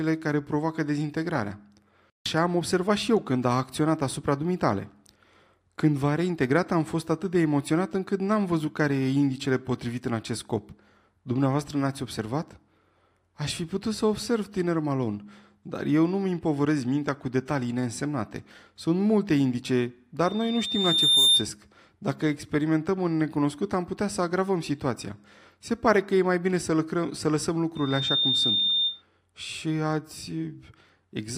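Loudspeaker feedback squeal at 20.24–21.48 s and 27.75–29.02 s: a 3.6 kHz tone swells over the speech, up to about 10 dB above it, a bright horizontal spectrogram line.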